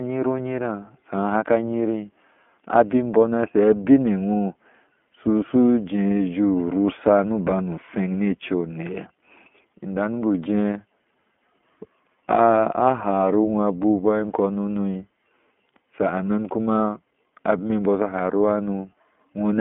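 Throughout, the speech sounds thin, rough and slightly synthetic, with nothing above 3.6 kHz. The iLBC codec codes each 20 ms frame independently, which fits 15.2 kbps.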